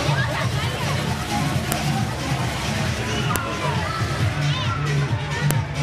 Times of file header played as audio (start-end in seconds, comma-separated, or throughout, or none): 1.72, 3.36, 5.51